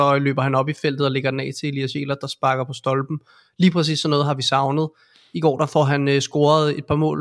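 Nothing goes wrong anywhere in the recording; the speech runs along without a single technical fault to point to.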